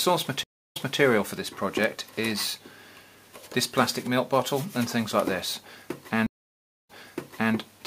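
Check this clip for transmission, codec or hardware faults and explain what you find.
Two stream reconnects are audible. At 0.43 s the audio drops into about 0.32 s of silence and returns by 0.99 s, picking up roughly 0.24 s earlier than where it broke off. At 6.26 s a longer gap of about 0.62 s follows, ending by 7.54 s and resuming about 0.65 s earlier. Each time, the connection failed, the player reconnected, and the server resent a burst of recent audio to a freshly started decoder. The result is a brief repeat of material, entering softly as the new decoder fades in.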